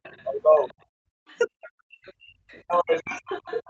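Other side's voice leaking through appears in this speech at 0.03–0.26 s, 0.59–0.74 s, 1.27–1.7 s, 2.04–2.13 s and from 2.52 s to the end, as a faint second voice about 20 to 30 dB under the talker. This likely comes from the far end playing on a loudspeaker, with the echo canceller leaving a residue in the microphone signal. Speech suppressed in double talk runs from 1.02 s to 3.41 s, overlapping the leakage. The talker's level dips by as much as about 40 dB in pieces totalling around a second, likely because the canceller could not separate near speech from echo and attenuated both.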